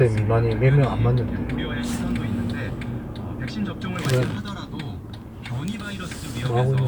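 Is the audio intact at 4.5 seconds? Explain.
Yes, the audio is intact at 4.5 seconds, with no dropout, click, distortion or other fault to be heard at that point.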